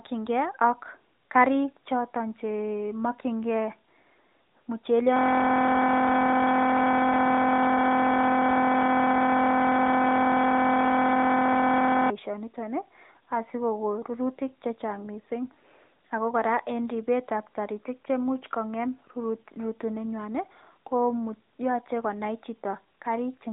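From the start the speech sounds boxed-in, thin and plainly buzzy and synthetic, with nothing above 3.8 kHz. This is the AMR narrowband mobile codec: phone-band sampling and a vocal-tract model rebuilding the voice from a few pulses per frame, at a damage level that fits a mid rate around 10 kbps.

From 5.16 s to 12.1 s the speech gives way to a steady buzz at 43.1 Hz. This is a system hang loop. The system froze while the audio hardware kept replaying a single 23.22 ms slice hundreds of times, which fits a 1024-sample ring buffer.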